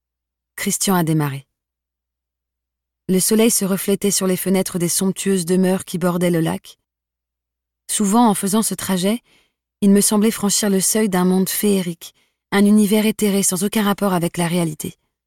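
No technical faults can be heard anywhere in the signal.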